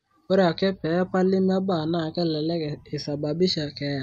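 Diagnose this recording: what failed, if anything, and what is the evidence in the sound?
Channels drifting apart throughout, heard as slow flanging: converters on separate clocks, some 150 ppm apart, let inter-channel delay creep to about half a millisecond.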